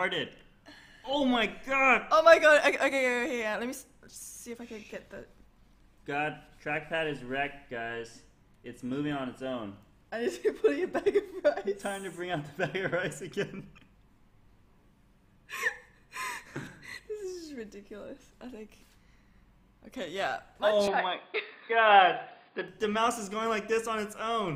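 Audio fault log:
20.88–22.68 s, input switched to a poorer device: the sound abruptly turns dull and boxy with nothing above 4.9 kHz, a small level jump and a faint new noise floor, with no gap at the switch, likely because recording moved to a narrower-band microphone before returning.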